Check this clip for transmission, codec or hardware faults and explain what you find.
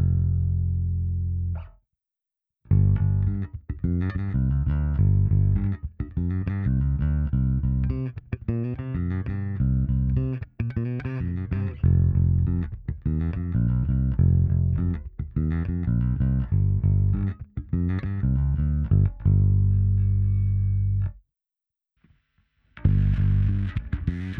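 No transmission, codec or hardware faults.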